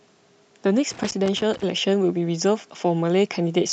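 From 0.91 s to 1.63 s, loose connector crackle cuts across the speech. A worn or dirty contact in the signal path is making and breaking in quick succession. Each break chops the audio for an instant, and each reconnection lands abruptly. The result is an irregular, scratchy burst of crackle lasting about 0.7 s. It has no steady rhythm. It stops as suddenly as it starts.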